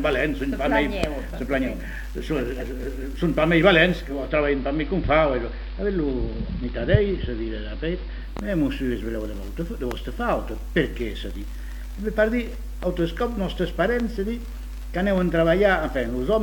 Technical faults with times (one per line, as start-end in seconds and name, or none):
3.98-8.56 digital radio blending to analogue